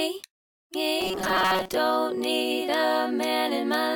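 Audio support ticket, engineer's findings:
Robotic sound from repeated short buffers, 1.01 to 1.75 s. The audio collapses into a rigid metallic buzz pitched at 188 Hz, with most of that stretch replaced by repeats. Likely an input or playback buffer starving: the same chunk of about 5.3 ms (1/188 Hz) keeps looping while the real audio is skipped. That fixed repeat period is what forces the steady pitch. Worth checking the buffer underrun handling first.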